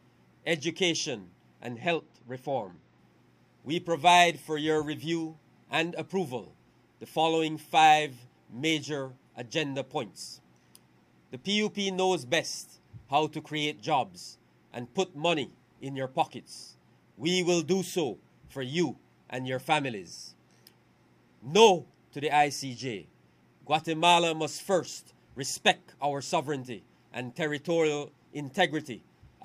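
From 1.69 to 2.98 s there is channel delay (comb filtering): one channel runs roughly two samples late, a few hundredths of a millisecond, and the mono sum cancels highs with a first notch around 10 kHz, leaving the sound briefly dull.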